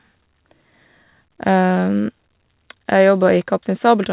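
Nothing goes wrong in this speech recording; it just sounds like a normal phone-style call, with the top end stopping around 4 kHz the way a G.711 A-law link at 64 kbps would leave it.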